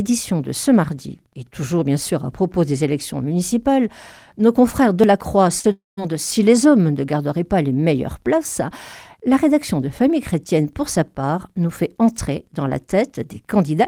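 At 5.59 to 5.66 s there is a short concealed packet loss: about 40 ms of the stream arrived too late to decode, and the receiver bridged the gap by extending the preceding sound before blending back in. It is heard as a brief smear or wobble.

From 5.72 to 5.99 s the audio drops out again, which points to a likely long network dropout. About 260 ms is lost; the last sound continues as a fading buzz or hiss, then roughly 160 ms of silence follows before the audio resumes further on.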